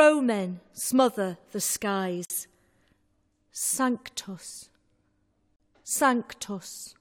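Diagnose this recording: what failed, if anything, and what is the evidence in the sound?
A gap at a join of encoded pieces opens twice: at 2.25 s, lasting 51 ms, and at 5.56 s, lasting about 39 ms. Each is a short hole of silence in otherwise continuous sound, with hard edges softened by codec smearing, after which the sound resumes where it broke off. This is a codec-stage fault: separately encoded segments were concatenated without trimming each run's leading encoder delay and final-frame padding, so that silence stays in at every join.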